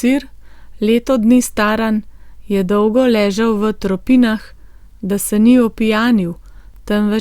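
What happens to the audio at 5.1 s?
Nothing goes wrong at 5.1 s; the speech there comes through intact, with no dropout, click, glitch or other fault.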